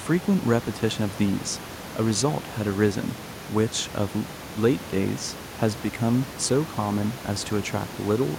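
Nothing stood out on listening to this speech recording, apart from room noise sitting about 17 dB below the speech, which is part of the recording itself.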